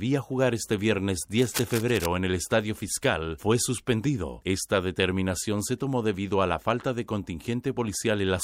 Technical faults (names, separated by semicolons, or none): cable scratch noise